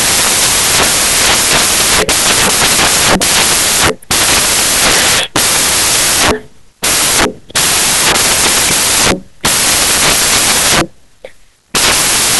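From start to finish the speech carries loud, harsh broadband noise: samples built from the wrong bytes. The low-order bytes, which change fast, now form each value's large part. Spectrograms show dense full-band noise.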